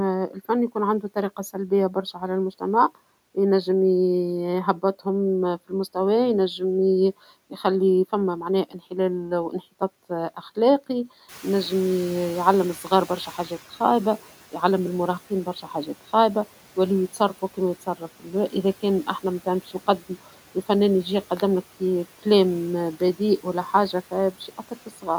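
At 11.28 s the noise suppressor is catching up: the room noise jumps by about 15 dB around 11.5 s, and the suppressor's noise estimate lags. For 2.32 s the noise comes through only lightly reduced, then sinks by about 9 dB by 13.6 s, just before "خايبة يعلم".

At 19.80 s, right after "كان أحنا مثلا بيش", a few tens of milliseconds of audio go missing between chunks. The likely cause is a recorder working in 10-second blocks and dropping a sliver at the handover. The two sides are butted together, heard as a tiny skip.

From 24.48 to 25.08 s, after "كلام بذيء ولا حاجة", speech is cut by the noise suppressor, which mistakes quiet parts for background. About a fifth of a second in total is pulled down, by up to about 12 dB, so those sounds come across swallowed and faint against room noise sitting about 21 dB below the speech.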